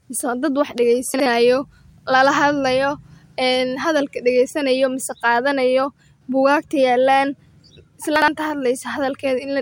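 At 1.14 s, right after "mise waa dad wax", and again at 8.16 s, two adjacent 60 ms chunks play swapped: chunks out of order, each one chunk late. Nothing is missing, but the 0.12 s span jumbles briefly and there are three hard joins.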